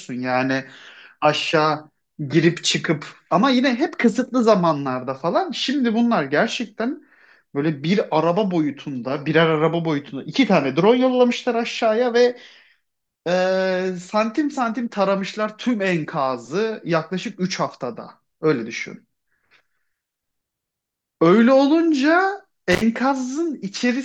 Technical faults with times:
22.71-22.82 intermittent contact

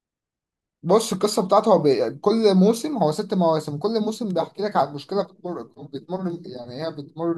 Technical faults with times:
none

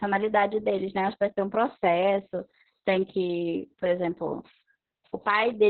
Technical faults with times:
0.00-5.69 Opus voice compression

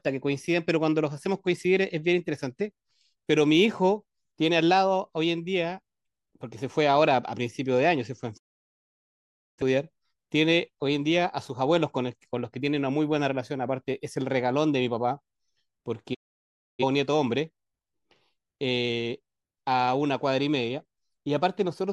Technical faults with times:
8.36-9.62 digital broadcast dropout
16.13-16.84 digital broadcast dropout

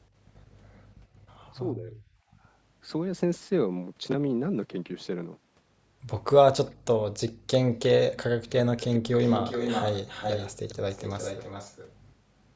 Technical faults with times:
1.69-1.97 speech suppressed in double talk
2.25-2.38 background gated by the echo canceller
6.66-6.71 echo leak
7.28-7.33 echo leak
7.34-7.47 background gated by the echo canceller
8.77-11.94 echo leak

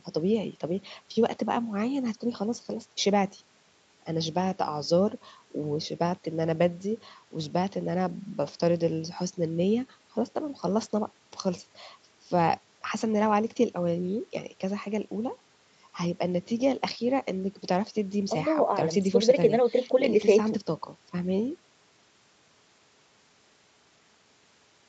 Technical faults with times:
none

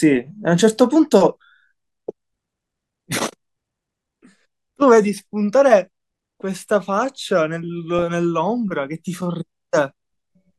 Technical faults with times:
7.99-8.02 DAB burbling

